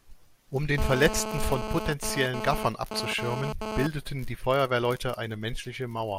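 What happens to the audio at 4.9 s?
Nothing goes wrong at 4.9 s; the speech runs on intact through that moment with no dropout, click or other fault.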